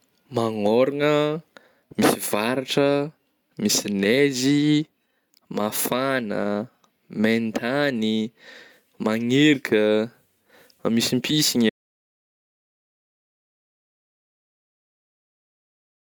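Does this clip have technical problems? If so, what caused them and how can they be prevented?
Yes. An audio dropout to silence starts at 11.70 s and lasts to the end. The speech stops mid-flow into digital silence with no room tone. A lost input, likely a disconnected device or failed link, caused it. Secure connections and monitor input levels while recording.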